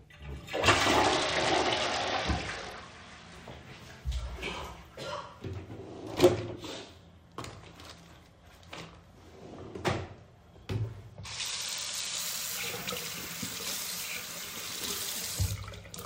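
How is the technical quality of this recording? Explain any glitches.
The recording has two clear quality dips. A Bluetooth SBC bit pool drop occurs from 1.02 to 3.35 s and again from 11.13 to 12.21 s. The link appears congested, so the encoder sheds bits. The upper sub-bands starve while the rest quantise coarsely, which fits a fall from a bit pool of 28 to 9, around 78 kbps. Each time, the treble dulls and gritty noise rises until quality returns.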